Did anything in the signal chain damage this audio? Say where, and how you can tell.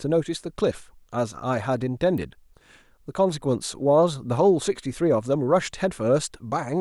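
Yes. A single sharp snap sits on top of the speech at 2.18 s, a modest click; likely an electrical switching spike picked up in the analogue wiring.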